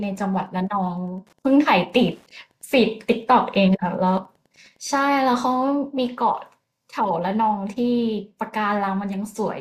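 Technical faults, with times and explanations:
0.00–5.50 s, Wi-Fi interference: faint, steady ticking about ten times a second, well below the speech, as the audio circuit rectifies a nearby Wi-Fi radio's beacon every 102.4 ms. Its sparse, regular clicks differ from the dense buzz of mobile-phone interference.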